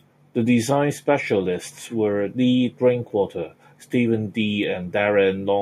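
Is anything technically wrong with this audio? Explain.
No, nothing technically wrong can be heard here.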